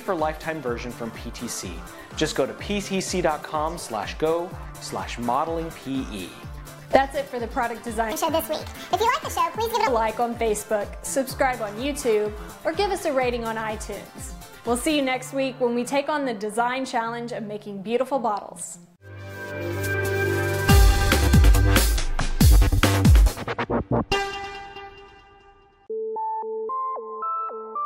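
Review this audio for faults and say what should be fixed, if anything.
Section at the wrong speed, 8.12 to 9.87 s: this stretch plays 1.51 times too fast, so the sound hurries and its pitch jumps up by roughly seven semitones together, then drops back to normal. The likely cause is the segment being resampled or played against the wrong clock. To prevent it, check that every edited or inserted segment runs at the project's native rate before export.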